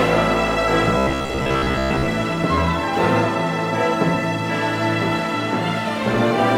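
Robotic sound from repeated short buffers runs from 0.98 to 2.09 s as a rigid, metallic buzz locked at 66.8 Hz. The likely cause is a starved buffer looping its last 15 ms of audio, so most of that stretch is repetition rather than fresh sound.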